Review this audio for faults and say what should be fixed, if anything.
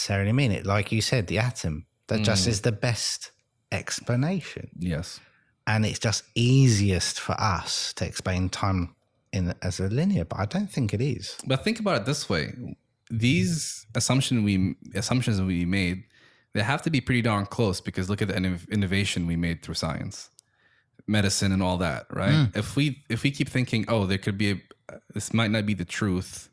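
No faults turn up anywhere in the speech. Nothing here needs to be fixed.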